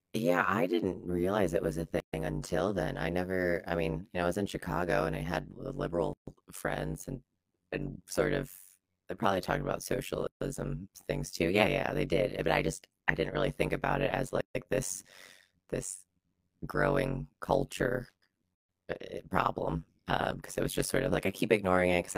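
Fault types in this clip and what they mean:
overlap-add ripple: Throughout, the level swings by about 60 dB roughly 100 times a second. Frames were windowed and overlapped so their gains don't sum evenly, and at such short frames the swing becomes a metallic buzz over the speech.
gap at a join of encoded pieces: At 2.00, 6.13, 10.27 and 14.41 s, repeating about every 4 s, the speech drops out for about 131 ms, then 139 ms three times. These are untrimmed encoder start delay and end padding between separately encoded pieces, after which the speech resumes.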